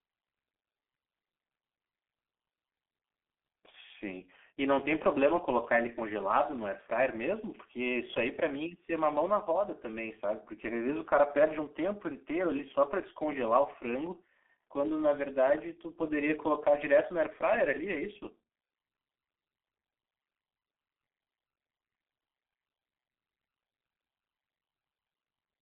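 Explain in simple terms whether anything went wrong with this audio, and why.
The whole recording went through the G.723.1 codec, an old phone-call squeezer. It cuts everything above about 3.6 kHz, so the speech sounds muffled, rough and smeared.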